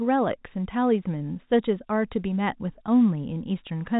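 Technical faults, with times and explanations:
No technical faults are present in this speech clip. It has passed through G.711 telephone coding, consistent with a 64 kbps mu-law stream, so nothing above about 3.8 kHz comes through.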